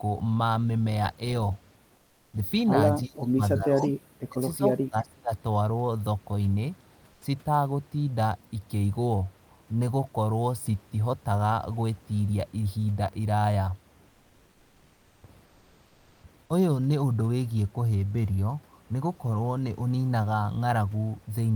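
First up, at 1.95 to 2.33 s, there's comfort noise in place of the background. The room noise, which normally sits about 33 dB under the speech, gets swapped for a flat, featureless hiss about 6 dB quieter. That's likely Opus DTX switching off transmission in the pause and the receiver filling in synthetic noise.

From 3.04 to 5.31 s the speech gets suppressed in double talk, in four bites: 3.04 to 3.92, 4.21 to 4.41, 4.57 to 4.62 and 4.79 to 5.31 s. The voice drops away sharply, by something like 35 to 40 dB at worst, though the short one dips only about 10 dB. Likely the echo canceller, faced with both sides talking, ducked everything.

Inside that stretch, at 3.75 to 3.89 s, there's an echo leak: a faint copy of the voice trailing about 0.34 s behind, roughly 25 dB down. Likely a loudspeaker's echo got past the canceller and was sent back.

The comfort noise shows up again at 7.13 to 7.21, 14.09 to 15.23 and 15.45 to 16.23 s. 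It's the same steady synthetic hiss, only 1 to 3 dB below the real background this time, so the switch is subtler.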